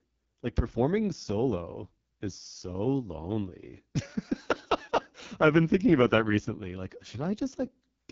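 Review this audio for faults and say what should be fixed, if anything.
AMR wideband (HD Voice) codec damage runs throughout: speech sounds rough and raspy, as a pulse-driven vocal tract model fails at what fits the lowest 6.6 kbit/s mode, with nothing above 7.2 kHz. To prevent it, encode AMR-WB at 12.65 kbit/s or higher, or keep a wideband source copy.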